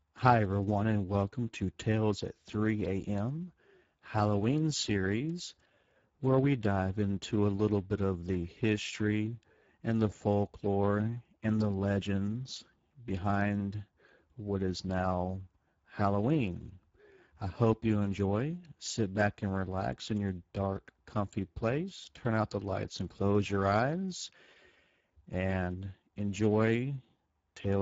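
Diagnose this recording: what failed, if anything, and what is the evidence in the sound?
The fault is at the codec stage: Speex codec damage runs through the whole speech clip. The coding artefacts are plainly audible from start to finish, and the spectrum stops at about 7.7 kHz, consistent with Speex wideband mode. The level of damage fits a low bitrate near 10 kbps. Speex is a CELP coder: it models the voice with a short-term filter plus a coded excitation, and at this rate the excitation gets few bits, so the waveform detail is lost.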